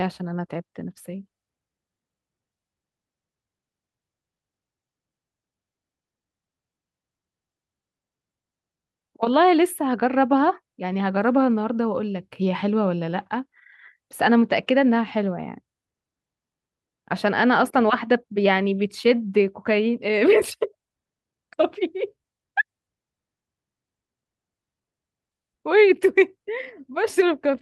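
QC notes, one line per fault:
No fault to note, so this clip needs no line per fault.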